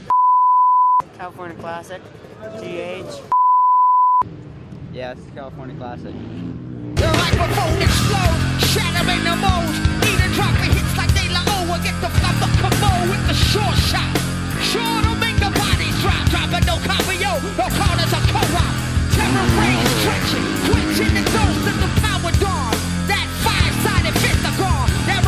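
No technical faults can be heard anywhere in the audio, which stays stable and continuous throughout.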